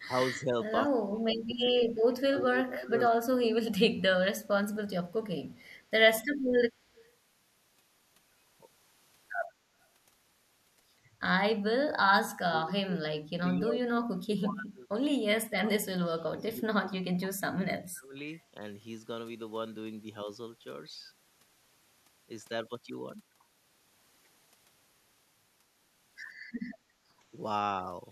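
From 0 to 0.55 s and again from 0.86 to 4.1 s the speech sinks and breaks up. This is speech suppressed in double talk, likely because the echo canceller took overlapping far-end talk for echo and turned everything down. The first dip is mild, around 10 dB. The second cuts far deeper, about 25 dB, over roughly three seconds. A waveform shows the envelope collapsing in patches, and a spectrogram shows the upper harmonics thinning or vanishing in those stretches.

Between 5.08 and 7.1 s, faint echo leak appears in three short scraps: at 5.08 to 5.13 s, at 5.54 to 5.8 s, and at 6.95 to 7.1 s. A far-end loudspeaker path was likely not fully cancelled, so a trace of the voice returns 149 ms late. It sits very low, some 40 dB under the speech, and the last scrap rises to about 30 dB under. A spectrogram shows a ghostly, smeared repeat of the preceding harmonic pattern, offset by that fixed delay.

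The same suppression returns harder from 11.51 to 14.89 s and from 15.46 to 18.18 s. Each run lasts about three seconds and drops as much as 35 dB, so the speech gutters and cuts out in pieces. On a waveform these show as chopped, hollowed blocks. On a spectrogram the high end goes dark.

From 26.44 to 27.08 s the background is gated by the echo canceller. The canceller clamped the microphone while the loudspeaker played, so the room tone falls by about 10 dB for roughly half a second and then comes back. This appears as a brief flat notch in the noise floor on the waveform, and as a momentary darkening across the whole band on a spectrogram.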